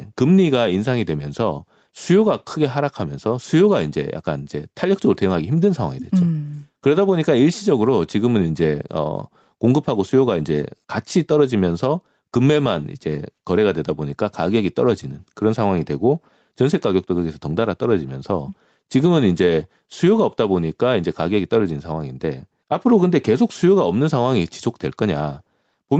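Throughout the speech, the level swings by around 5 dB, so loud and quiet passages sit unnaturally close together and the whole recording feels squashed. This gain pumping is likely caused by the input gain being set far too high, with a fast limiter or compressor clamping down on every peak. Nothing is heard above 8 kHz, which fits the band limit of a call codec.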